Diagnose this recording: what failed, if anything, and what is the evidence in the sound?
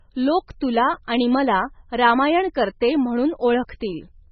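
The damage is at the codec stage, and it's likely MP3 compression, pushed hard. The whole speech clip has a sharp ceiling with nothing above about 5.9 kHz, so the s sounds come out dull. Under that cutoff it's watery and swirly, and consonant onsets smear. That's the encoder starving: it lops off the treble, then zeroes weak frequency lines that blink on and off between frames. The heavy damage fits a very low bitrate, something around 16 kbps.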